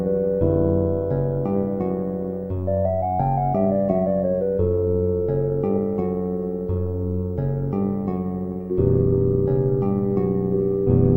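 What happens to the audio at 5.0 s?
At 5.0 s, overlap-add ripple is present, as it is across the whole clip. The frames were rejoined with an overlap whose gain doesn't sum evenly. The level dips by about 11 dB roughly a hundred times a second, giving a metallic buzz with extra tones around each note.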